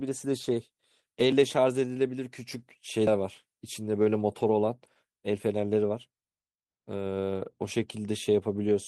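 At 3.07 s the speech jumps forward, and about a tenth of a second of material never arrives. There is no silent gap, just an abrupt splice where two moments meet. That points to a dropped buffer (overrun), likely caused by the program not reading the audio before the hardware overwrote it. The missing chunk and the hard join, with no pause, set it apart from a network dropout, which usually leaves silence or a smeared fill.

At 4.47–4.49 s and again at 7.35–7.37 s, a 20 ms stretch turns briefly coarser and noisier while the speech keeps flowing without any break. Each is a lost packet rebuilt from error correction. The packet went missing, but the next one carried a low-bitrate spare copy, and the decoder played that copy in its place. Nothing skips and nothing falls silent, so unlike the buffer drop there is no jump in time, only a short drop in quality.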